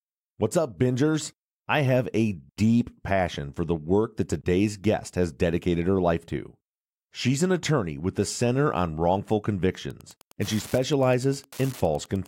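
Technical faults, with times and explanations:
9.82 to 12.27 s, Wi-Fi interference: a steady ticking rides under the speech to the end of the clip, roughly 25 dB below it, with one tick every 102.4 ms, or close to ten a second. A nearby Wi-Fi radio's beacon bursts are being rectified by the audio circuit, so each transmission becomes a click. That slow, even tick rate separates it from mobile-phone interference, whose bursts repeat hundreds of times a second and merge into a buzz.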